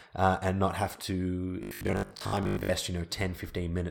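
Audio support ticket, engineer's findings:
Robotic sound from repeated short buffers, 1.63–2.75 s: rigid metallic 50 Hz buzz loosely following speech. Likely cause: audio arriving too seldom, playback looping its last 20 ms for most of the stretch. Waveform: identical 20 ms cycles. Spectrogram: flat 50 Hz harmonic comb.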